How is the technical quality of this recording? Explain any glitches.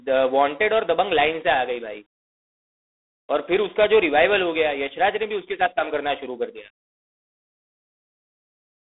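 The quality is poor: the whole recording carries telephone-grade coding damage from G.726 ADPCM throughout. The codec sends only a few bits per sample describing the error from an adaptive prediction. The coarse rasping hiss here fits the 24 kbit/s rate, and it rises and falls with the speech level. The band runs from about 250 Hz to 3.6 kHz, with nothing above 3.8 kHz. A spectrogram shows a hard ceiling there and grainy noise filling the harmonics during speech.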